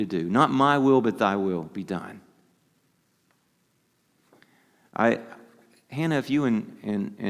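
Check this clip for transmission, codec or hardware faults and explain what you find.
I found no faults to explain in this clip.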